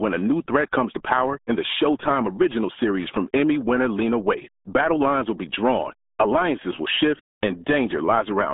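Speech runs through the RealAudio 14.4 codec from start to finish, its band squeezed to roughly 200 Hz–3.6 kHz with nothing above 4 kHz. Heavy coding damage leaves it muffled and gargly, consistent with an 8 kbit/s dial-up-era speech coder.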